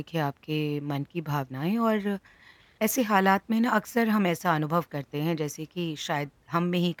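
Nothing technically wrong turns up anywhere in this speech recording, so there's no fault to point to.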